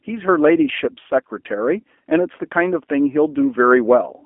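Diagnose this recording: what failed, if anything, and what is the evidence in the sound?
The speech sounds narrow, rough and faintly synthetic from start to finish, with nothing above about 3.5 kHz and the low end thinning out below 250 Hz. That points to the codec stage: G.729 codec damage, plainly audible. The coder rebuilds each 10 ms frame from a vocal tract filter, a pitch predictor and a few pulses rather than the waveform itself, which fits an 8 kbit/s G.729A coder behind a 250 Hz to 3.4 kHz telephone line band.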